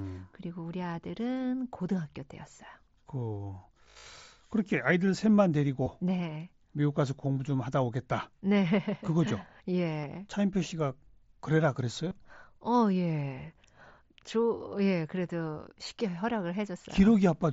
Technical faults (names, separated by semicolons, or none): concealed Bluetooth headset packet loss